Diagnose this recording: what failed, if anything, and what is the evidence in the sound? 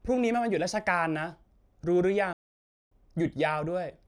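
A playback stall, at the playback stage. The speech stops abruptly at 2.33 s and the output is silent until 2.92 s, a gap of about 0.58 s. There is no fade or tail into the gap. The sound simply cuts off mid-flow and then resumes. The likely cause is the player running out of buffered data, or its output thread being blocked, so nothing reached the output until it recovered.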